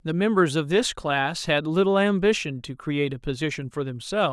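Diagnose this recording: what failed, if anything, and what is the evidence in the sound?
Nothing failed; no stage of the chain leaves any evidence of a fault in the sound.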